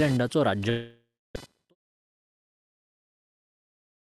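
Throughout the speech, processor or graphics load shifts the audio ground, causing computer activity noise: a chirping buzz near 500 Hz, roughly 25 dB under the speech.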